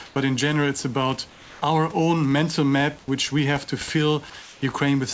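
The room background turns into a smooth, featureless hiss at 0.06 to 0.16 s before "but in general it's", at 1.30 to 1.62 s between "in general it's about" and "our own mental map", and at 4.42 to 4.62 s. It is likely comfort noise in place of the background, synthesised during discontinuous-transmission pauses.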